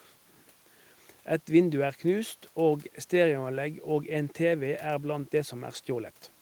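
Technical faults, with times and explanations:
No technical faults are audible.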